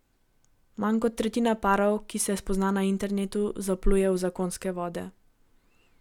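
No technical faults turn up anywhere in the recording. The speech continues without any audible break or disturbance.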